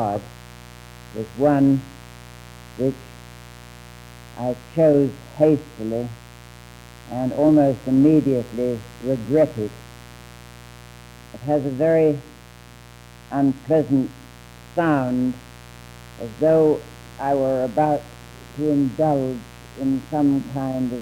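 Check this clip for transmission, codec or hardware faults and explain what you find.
There's one hardware fault here: mains buzz, running the whole way through. It's a steady, raspy buzz built on 60 Hz, with harmonics climbing up into the several-kilohertz range. That spread comes from sharp switching spikes, from something like a dimmer, a rectifier or a missing shield, getting into the signal twice every mains cycle. It sits roughly 25 dB below the programme material, so it's present underneath everything rather than hiding in the gaps.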